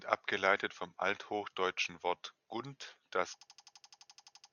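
A system hang loop strikes this speech clip from 3.41 s to 4.52 s, just after "gunt das". The computer or driver stalls while the audio hardware keeps replaying its ring buffer, so one 85 ms slice repeats exactly, about 13 times at roughly 11.7 Hz, which fits a 4096-sample buffer. The result is a rapid machine-gun stutter that runs to the end, with about a second of the real audio lost.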